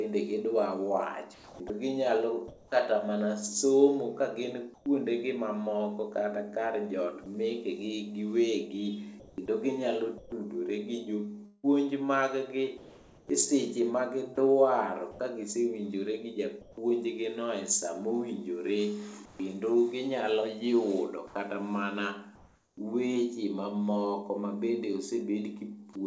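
From 1.34 to 2.72 s the speech is choppy, likely sound chopped by the voice detector. About 520 ms is replaced with comfort noise before "kata mana somo kagin".

After "kata mana somo kagin", from 4.74 to 4.86 s, the background turns flat and featureless. This is likely comfort noise in place of the background. It sits about 4 dB lower, around 28 dB below the loud parts.

From 7.24 to 16.77 s the chopping returns, likely from the voice detector switching repeatedly. About 1.3 s in total becomes synthetic fill.

From 19.25 to 22.77 s the real background again gives way to steady synthetic noise, likely comfort noise, for about 640 ms in all.

At 22.75 s the returning speech starts abruptly. The first 20 ms is missing, likely an onset clipped by the voice detector reacting late. Throughout, the call path has no content above 8 kHz, which fits G.722 at 64 kbps.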